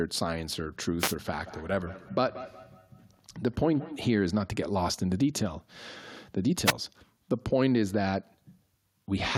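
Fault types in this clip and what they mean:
Wireless microphone noise hit: the analogue FM radio link from the microphone faded as reflected signals cancelled, letting receiver noise surge through. It comes across as short swishes of static from 0.99 to 1.15 s and again from 6.66 to 6.72 s.
Feedback echo between two devices: a second device in the room played back this microphone's signal, which was picked up again beyond its echo canceller's reach. From 1.4 to 4.19 s, speech returns about every fifth of a second, thinner and ringing, peaking about 15 dB below the voice.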